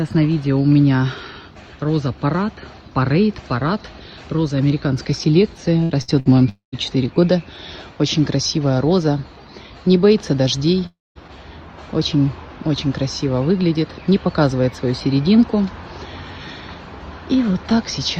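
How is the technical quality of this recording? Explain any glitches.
The recording has network glitches in two forms. Around 5.83, 6.02 and 6.20 s there's a burst of packet loss: each time about 60 ms of audio goes missing, the receiver stretches the last sound into a brief fading buzz or hiss, then jumps ahead. Then come two long network dropouts, from 6.49 to 6.75 s and from 10.86 to 11.18 s, likely from the connection stalling. The concealed tail fades away before a short stretch of silence, and the audio resumes with roughly a quarter to a third of a second lost.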